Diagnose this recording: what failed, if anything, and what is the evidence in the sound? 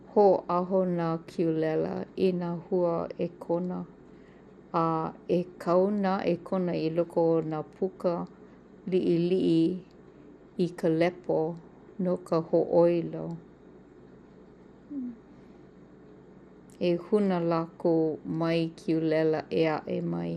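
The codec stage is where it went wrong. The speech sounds dull for the whole clip, with nothing above about 13.7 kHz, and there's a clearly audible gurgling, grainy texture on top. That's likely MP2 compression at a tight rate, which fits something around 80 kbps. Layer II cuts the signal into 32 sub-bands and shares out bits. When bits run short, the top bands get dropped and the rest are quantised coarsely, which gives you that granular churn.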